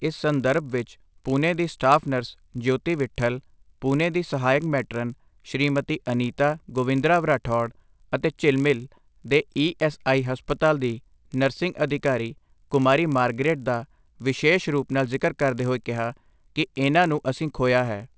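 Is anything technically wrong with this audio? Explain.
Yes. Throughout the speech there is a faint buzz caused by a resampler restarted on every block. The conversion from 48 kHz to 16 kHz was run on 20 ms blocks independently, so each block's edges were filtered without the true neighbouring samples, leaving a small discontinuity every 20 ms. That repeats at 50 Hz, heard as a buzz that rides on the voice and drops out in pauses. On a spectrogram it shows as faint vertical lines spaced 20 ms apart, present only where there is signal. In the waveform there are small steps at each block boundary.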